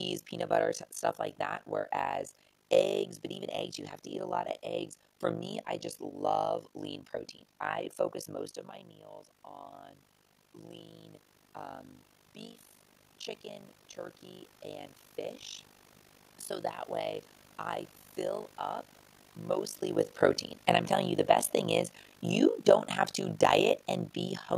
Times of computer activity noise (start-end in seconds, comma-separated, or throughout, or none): none